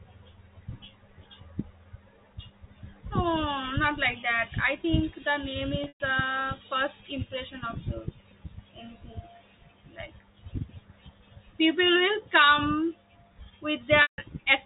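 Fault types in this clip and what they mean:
Packet loss with pitch repetition: lost stretches of speech around 5.84 to 6.00 s and 14.02 to 14.18 s were bridged by repeating the last pitch period. On a spectrogram the harmonics hold flat and fade, and the waveform shows identical repeating cycles decaying before the speech resumes.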